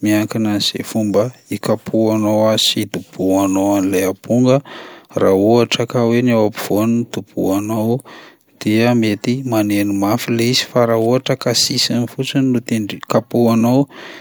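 Nothing goes wrong anywhere in this speech recording, so there's no fault to point out at any moment.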